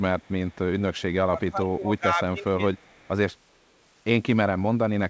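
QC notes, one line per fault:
0.19–0.32 s, 0.49–0.56 s, 0.80–1.02 s and 2.74–3.10 s, echo leak: the far end's echo canceller likely let residual loudspeaker pickup through. A faint copy of the speech, about 35 dB down and lagging roughly 0.39 s behind, surfaces in short, ghostly scraps.
1.31–2.57 s, speech suppressed in double talk: with both sides talking at once, the echo canceller likely mistook the near talker for echo and clamped down. Across about a second of this span the speech dips by as much as around 20 dB and breaks up in pieces.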